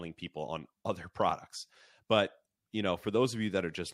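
No faults are audible in this speech recording, which runs without any dropout, glitch, distortion or timing error.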